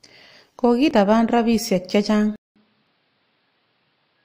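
At 0.91 s, just before "rapisyek che", and again at 1.89 s, there is a tiny skip where the waveform jumps. This is an overlap between stream segments: adjacent one-second segments claimed a few milliseconds of the same time, and trimming that overlap removed real sound. The two skips fall almost exactly a second apart, matching the segment boundaries. Unlike a dropout, they leave no silent gap, only an abrupt splice.

From 2.36 s to the end, the sound changes character after a silence of about 200 ms. Nothing reaches above 5.4 kHz, so it turns duller and boxier. The level drops by roughly 5 dB, and a new background noise appears, sitting around 45 dB below the signal. This points to the input likely being switched to a poorer device. A simple low-pass filter would not also shift the level and noise floor, or bring the brief silence at the changeover.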